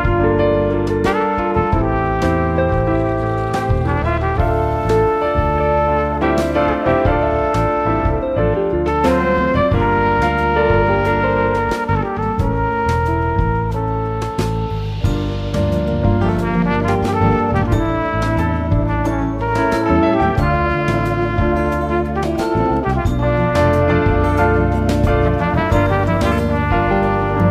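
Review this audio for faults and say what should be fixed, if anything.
Nothing here needs fixing, so you can leave it as it is.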